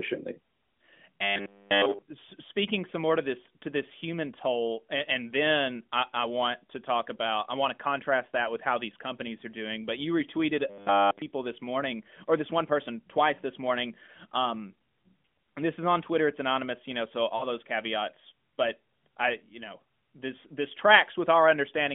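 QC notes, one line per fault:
1.23–2.03 s and 10.70–11.22 s, robotic sound from repeated short buffers: new audio most likely stopped arriving on time, so playback kept looping a stored fragment of about 10 ms in place of the real signal for the whole of each span. Repeating a fixed 10 ms slice stamps a steady 100 Hz periodicity onto the sound, giving a rigid, metallic buzz that only loosely follows the speech's rhythm before normal audio resumes.
17.36–17.45 s, lost AMR speech frames: two consecutive 20 ms frames, 40 ms in all, failed to decode, and the AMR-NB decoder, running at 12.2 kbps on a 200 Hz to 3.5 kHz line band, filled the gap by reusing the last good pitch and vocal-tract parameters at reduced gain. The result is a brief dip or warble, and the following speech returns weak or rough for a moment.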